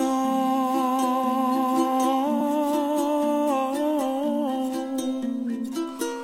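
Compressed frames are skipped at 2.39 s: about two 26.1 ms frames, roughly 50 ms of audio, never play, so the sound jumps ahead. The waveform shows a sudden envelope discontinuity.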